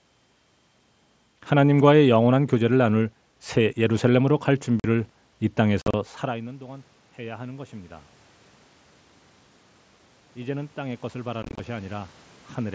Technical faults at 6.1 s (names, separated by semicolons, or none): automatic gain rising